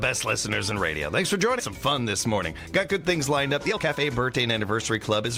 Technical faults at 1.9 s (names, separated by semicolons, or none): jitter buffer speed-up